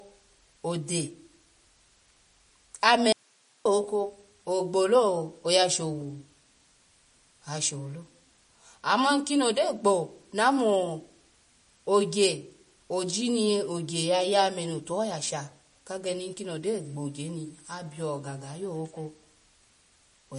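MP3 compression runs throughout this speech clip: nothing remains above 10.6 kHz and the watery, swirly damage is plain, likely from a low-bitrate encode around 40 kbps. An audio dropout to a faint residue follows from 3.13 to 3.65 s, where the speech cuts abruptly to hiss roughly 35 dB down for half a second, likely a brief signal loss with the path left live.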